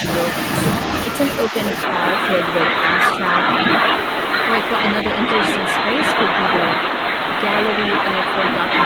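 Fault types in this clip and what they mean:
Speech suppressed in double talk: The speech dips by about 5 dB in two very short spots, right at the start around 0.0 s and again from 1.48 to 1.56 s, each lasting well under a tenth of a second. That brief ducking is likely the echo canceller hearing both ends active at once, failing to separate the near talker from loudspeaker echo, and turning everything down until it settles.
Input switched to a poorer device: From 1.83 s to the end, the sound passes a narrower band, so it goes duller and boxier, and a new noise floor roughly 40 dB under the speech appears. There's no gap at the changeover and the level holds steady, so it's the tone that gives it away. This is likely the system hopping to a narrower-band microphone or a headset's call profile partway through.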